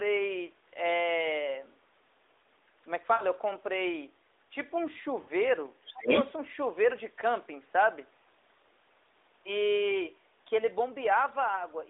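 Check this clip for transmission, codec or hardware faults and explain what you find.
Yes, the clip has three kinds of fault: lost AMR speech frames, the other side's voice leaking through, and speech suppressed during double talk. The AMR narrowband codec itself passes a band of roughly 300 Hz to 3.7 kHz with only light coding roughness.

Lost AMR speech frames occur at 3.14–3.24 s, 5.22–5.30 s and 11.56–11.64 s. The first two last about 60 ms each, which fits three 20 ms frames. The last lasts about 20 ms, which fits a single frame. Each time, the decoder re-uses the last good pitch and vocal-tract settings with falling gain, so the speech smears and dims briefly. This differs from a hard dropout because the sound is stretched out rather than abruptly silent.

The other side's voice leaking through runs from 5.83 to 6.32 s. A second voice appears, somewhat louder than the talker, most likely because the echo canceller left part of the loudspeaker signal in the microphone path. 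It differs from crosstalk on the line because it reaches the microphone from the loudspeaker.

Speech suppressed in double talk occurs inside that leak, at 5.92–6.08 s, over about 150 ms. The talker dips by up to about 20 dB. The likely cause is the canceller turning everything down while both sides spoke. Unlike frame loss, the dip coincides with the second voice and contains no smeared, repeated sound.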